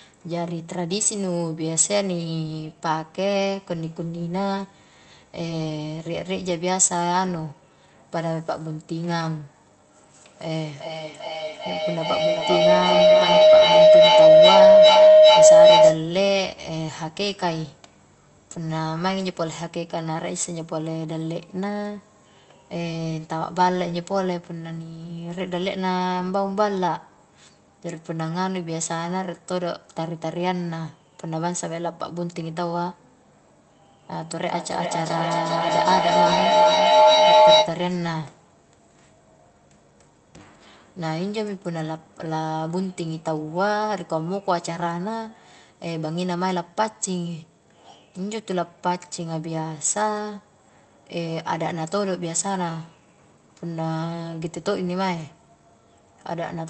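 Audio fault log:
10.16–16.11 s and 34.15–37.84 s, feedback howl: a ringing tone near 700 Hz swells over the speech, with repeats roughly every 0.4 s. It peaks about 13 dB above the speech in the first episode and about 10 dB above in the second, then cuts off. A microphone is picking up a loudspeaker in the same room on the same call. Each trip around that loop adds level, so the repeats grow instead of dying away and narrow to the pitch the loop favours, until the loop is broken.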